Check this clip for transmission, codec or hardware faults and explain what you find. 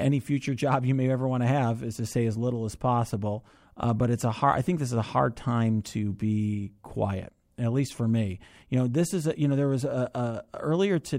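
Nothing stood out on listening to the speech in this clip.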